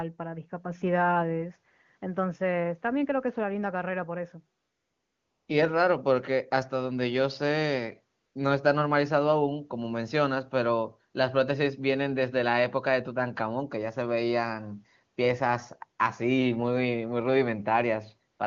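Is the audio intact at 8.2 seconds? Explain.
No. From 8.19 to 8.35 s there is AMR comfort noise: for about 160 ms the sending phone judged the talker silent and stopped transmitting speech frames, so the receiver generated synthetic noise from a coarse estimate of the background's level and spectral shape. The genuine background drops out and a smooth, steady hiss switches in for that span, then switches back out.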